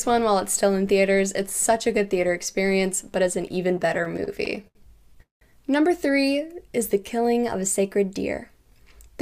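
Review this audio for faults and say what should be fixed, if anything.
From 0 to 3.57 s there is a steady buzz at 200 Hz. This is a filter restarted on every block. The filter drops its memory at each block edge and starts again from silence. Each restart leaves a small click. Clicks every 5 ms fuse into a 200 Hz buzz, which points to blocks of about 5 ms. The buzz rises and falls with the level of the sound. To prevent it, carry the filter state over from one block to the next.

From 3.77 to 4.77 s the audio stutters. These are repeated stalls (stutter). The jitter buffer kept running dry as packets came late. Each time, the receiver stretched the last sound until more arrived. There are over a dozen short holds, the longest 78 ms. Together they add about 233 ms, roughly a quarter of that second. Nothing is lost, but the flow drags and jerks. To prevent it, give the jitter buffer enough depth for the network's delay variation.

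At 5.22 s the audio freezes for about 0.19 s, until 5.43 s. This is a call audio freeze. The last sound carries on briefly and then fades. About 150 ms of it is silence. The audio then resumes where it stopped, so nothing is missing. A gap has simply been inserted, and everything after it is pushed 191 ms later. The likely cause is a burst of packets held up in transit that emptied the buffer. To prevent it, use a path with steadier delay and a buffer that adapts before it runs empty.

From 6.36 to 7.57 s the audio slows to about 91% speed with no change in pitch. This is a jitter buffer slow-down. The receiver was rebuilding its reserve, so it repeated single pitch periods and small stretches of pause. About 110 ms was added over this stretch. Sounds come out drawn out. To prevent it, let the buffer grow in smaller steps, ideally during pauses.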